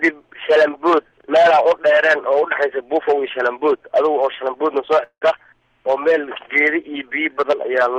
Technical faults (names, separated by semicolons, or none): long network dropout